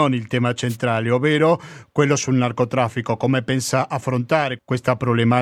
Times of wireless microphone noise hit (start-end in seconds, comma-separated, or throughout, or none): 0.68-0.77